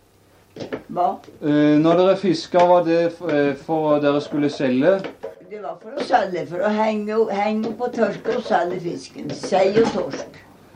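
A digital gain setting was most likely applied without any ramp, changing the level from one sample to the next, so the clip shows a sudden gain jump at 5.35 s. The audio and its background noise drop together by about 12 dB in an instant rather than fading, and they stay at that lower level until 5.97 s, where the level snaps back up just as abruptly. The result is a brief, step-shaped dip with hard edges at both ends.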